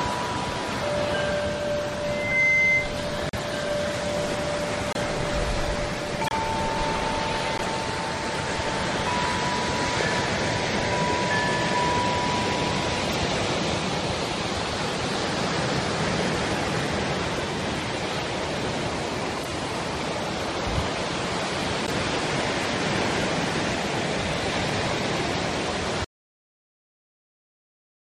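At 2.04 s a loudspeaker feedback squeal starts. A microphone is hearing its own loudspeaker, and the loop gain tops one at 2.1 kHz. The tone swells over roughly 0.4 s, ends up about 5 dB above the sound, and stops at 2.97 s.

Corrupt frames decoded follow at 3.29, 4.91, 6.24, 7.58, 13.10, 19.43 and 21.82 s. Damaged compressed frames were played anyway, so energy lands at wrong frequencies. Each is a short chirp or noise burst spanning a few frames. Peaks reach about −10 to −20 dBFS.

At 26.04 s comes an audio dropout to silence. The sound cuts off into silence, with no room tone. It stays silent to the end. The likely cause is a lost input while the recorder kept writing silence.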